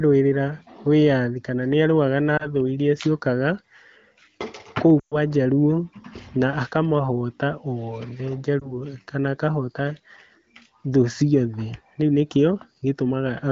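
Lost AMR speech frames occur at 2.37–2.50 s after "wĩyathi kana nĩarũaga na", at 4.99–5.17 s, and at 8.60–8.78 s before "kana akahota". The decoder reuses the last pitch with falling gain. The outer two are brief dips or warbles, fitting one 20 ms frame. The middle one loses about 120 ms and drops to near silence within two frames.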